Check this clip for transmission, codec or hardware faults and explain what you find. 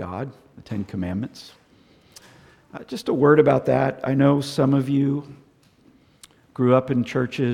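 Nothing here sounds off; I couldn't hear anything that points to a problem with the transmission, the codec or the hardware.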